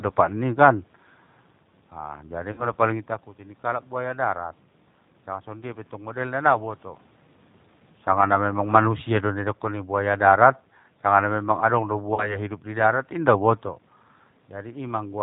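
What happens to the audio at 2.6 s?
Right there you're hearing VoIP packet loss concealed by the speech codec, from about 2.52 to 2.66 s, just before "napaling itakuti ningkalak buaya". Roughly 60 ms of audio went missing, which fits three 20 ms packets, so the decoder kept extending its last pitch and filter at falling gain. That gives a short, fading smear, and the audio stays a bit weak and distorted for a moment after packets come back.

Underneath all of it sits the 8 kbit/s G.729 codec, which rebuilds the sound from a vocal tract filter, a pitch predictor and a few pulses per frame. Nothing above 4 kHz gets through, so the sound is dull, rough and somewhat synthetic.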